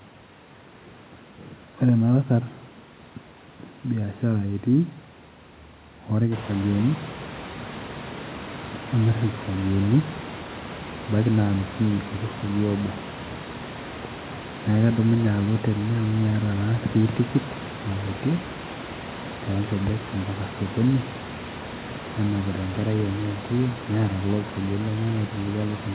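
No faults: the background room noise steps up by about 14 dB roughly six and a half seconds in and then sits about 16 dB under the speech, and the band stops at 4 kHz, which fits a narrowband G.711 call path.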